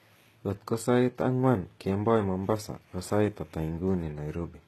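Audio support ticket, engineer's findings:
HE-AAC compression, throughout. Treble present but synthetic, with nothing above 12.3 kHz. S sounds gritty and lispy, top end metallic, damage plainly audible. Likely cause: HE-AAC encode at low rate, sound fits around 16 kbps. Upper band rebuilt by copying lower speech bands upward under a coarse envelope, so harmonics misalign across the crossover.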